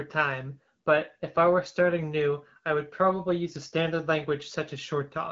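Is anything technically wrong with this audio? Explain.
No, nothing technically wrong stands out here.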